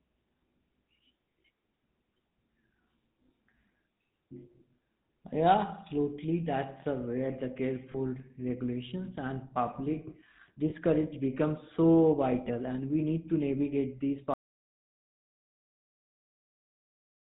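Speech runs through the GSM full-rate codec for its whole length. The vocal-tract model and coarse pulse excitation make voices buzzy and gravelly, with nothing above 4 kHz. Lost GSM frames are heard at 7.92 to 7.96 s and 10.70 to 10.73 s. Each time, the last good frame is replayed as a brief metallic ring, which fits one missing 20 ms frame. From 14.34 s to the end, an audio dropout to silence leaves silence with no room tone. The likely cause is a lost input while the recorder kept writing silence.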